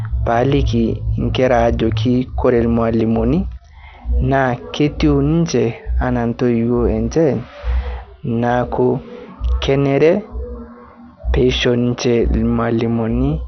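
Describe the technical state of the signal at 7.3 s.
At 7.3 s the speech carries MP2 compression damage, as it does for the whole clip. The sound is dull and gurgling with granular distortion, likely from MPEG Layer II coding at a low bitrate, perhaps around 48 kbps, where upper sub-bands are switched off and the remaining bands are coarsely quantised. A spectrogram would show nothing above about 6.2 kHz, with blocky, flickering energy below that.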